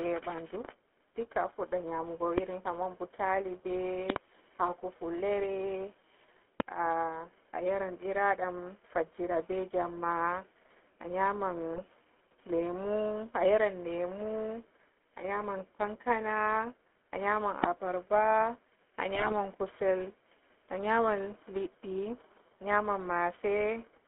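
Throughout, the speech has a buzzy, gravelly roughness and nothing above 3.4 kHz, the plainly audible signature of the GSM full-rate codec, consistent with 13 kbps coding. Sharp loud pops, roughly 20 to 25 dB above the speech, hit at 2.38–2.40 s, as a quick double at 4.10–4.18 s, and at 6.60–6.62 s. The speech carries on beneath them, and the cause is likely a voltage spike from a plug, switch or static. At 5.42 s a brief squawk bends the spectrum, from GSM bit errors: corrupted filter, pitch or gain values reaching the decoder. Longer gargling bursts from the same GSM bit errors follow at 11.74–11.89 s. Another loud pop lands at 17.64–17.66 s, just after "a nyaman". A final stretch of gargling from GSM bit errors runs at 19.11–19.33 s.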